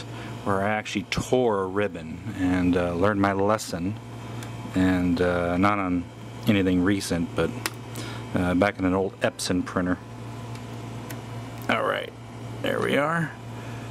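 No technical faults can be heard anywhere in the clip. The audio runs without dropouts, clicks, distortion or timing disturbances.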